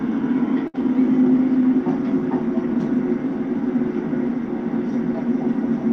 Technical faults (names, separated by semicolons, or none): short stall from a late packet